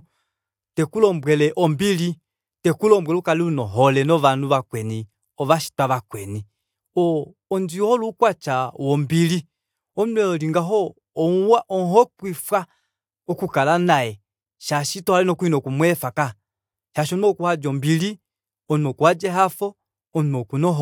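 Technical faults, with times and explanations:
No technical faults can be heard in this speech.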